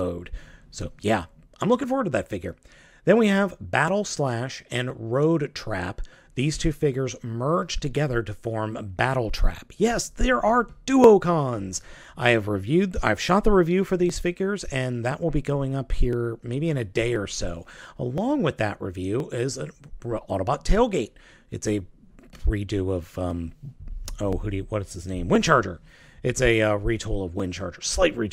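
Periodic USB or driver dropouts run from 0.81 to 27.40 s: every 1.02 s roughly a millisecond of audio is skipped, giving around thirty evenly spaced ticks. Each shows as a thin vertical broadband line on a spectrogram and a small waveform discontinuity.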